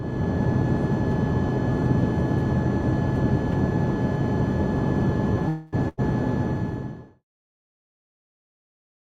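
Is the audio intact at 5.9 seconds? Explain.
No. From 5.88 to 6.00 s the audio stops moving forward: the last sound before the gap is held and smeared, sinking in level for about 100 ms, and then the audio picks up again slightly further along. This is a burst of packet loss. Roughly 100 ms of audio never arrived in time, and the receiver filled the hole by extending and fading the last sound it had, so that stretch is simply missing.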